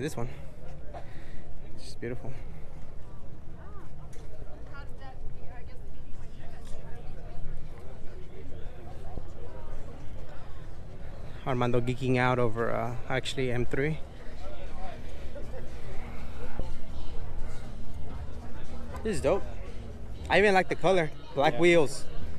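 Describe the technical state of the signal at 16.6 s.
At 16.59 s the audio jumps forward: compressed frames skipped, about two of them, each 26.1 ms long, so roughly 50 ms of sound never plays. The decoder drops whole frames, either missing from the file or rejected as damaged, and resumes further on. The sound jumps ahead by the length of the missing frames, rather than falling into the silent gap of a dropout.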